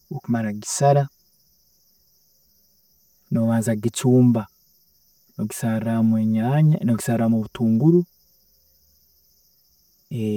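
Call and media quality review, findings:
Channel delay (comb filtering), whole clip: hollow, phasey speech. One channel lags around 5 ms before the mono sum, so notches repeat from near 100 Hz upward. Notches stay fixed, unlike a sweeping flanger, and there's no reverb tail as with room echo.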